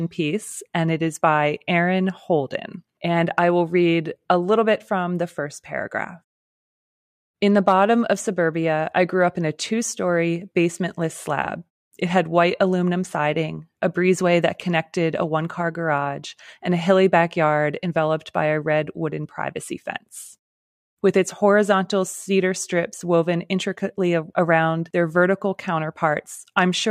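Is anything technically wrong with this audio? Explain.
No, nothing here sounds technically wrong; it's just speech coming through the way it should.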